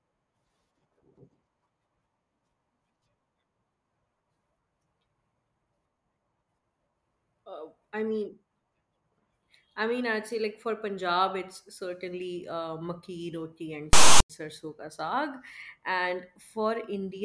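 At 13.93 s the speech is cut off by a harsh, loud rasp with hard edges, lopsided as if pushed to one side, and part of the span drops to dead silence before normal audio returns at 14.30 s. This is file tags played as audio: a block of text tags and zero padding was decoded as if it were samples. The text bytes produce the offset rasp, while the zero padding reads as silence.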